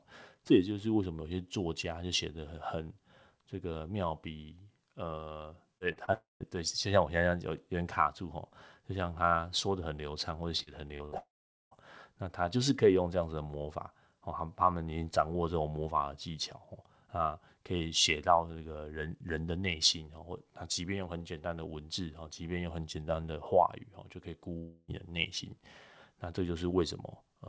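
Speech, with three kinds of network fault. Short concealed packet loss appears as three brief smears or wobbles at 5.78, 5.92 and 6.05 s, each about 30 ms, where the decoder extends the preceding sound and blends back. Unlike the robotic stretch, each is isolated. A long network dropout, likely from the connection stalling, follows at 6.13 to 6.43 s and recurs at 11.18 to 11.74 s and 24.58 to 24.91 s. The last sound is stretched into a fading buzz and gives way to silence for about 0.15 s and 0.43 s in the first two. The third fills its whole gap with concealment and has no silence. Speech then resumes with material missing. Repeated packet loss (robotic sound) runs from 10.57 to 11.15 s, with four holes of up to 66 ms patched in quick succession, making the speech choppy rather than briefly blurred. The audio is band-limited to 8 kHz, which fits a wideband call codec such as G.722.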